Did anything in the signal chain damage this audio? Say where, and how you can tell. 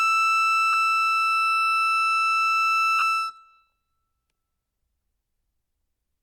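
Yes. Lost LE Audio frames on the Bluetooth link: 10 ms at 0.73 s and 30 ms from 2.99 to 3.02 s. The LC3 decoder's spectrum-repeating concealment smears the music into brief noise.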